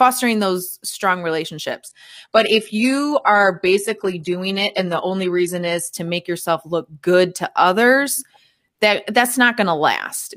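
A switch of the adaptive stream to a lower bitrate runs from 1.89 s to 5.89 s, starting just before "to make yourself look". The speech suddenly takes on more codec artefacts, with no gap at either edge. This is what happens when a player drops to a cheaper rendition while the connection slows. The sound points to a step down from around 96 kbit/s AAC to a roughly 16 kbit/s HE-AAC stream, where the highs are rebuilt rather than coded.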